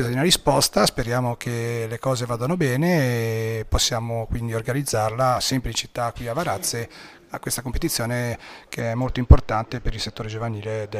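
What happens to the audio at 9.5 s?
From 8.80 s to the end, channel delay causes comb filtering: one channel runs about two samples late, and the mono sum cancels a notch near 10 kHz. The top dulls through a broad, gradual dip centered there.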